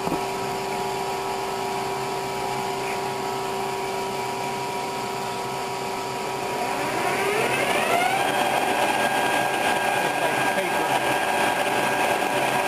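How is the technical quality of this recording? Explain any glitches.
The recording has a fault running through its whole length: a filter restarted on every block. Somewhere in the processing chain, a filter discards its internal memory at each block boundary and begins the next block as if the input before it had been silent. Each restart leaves a tiny transient, and because these recur at a steady rate of 345 Hz, which fits a 128-sample block, they merge into a constant buzz under the sound that grows louder and quieter with the signal's level.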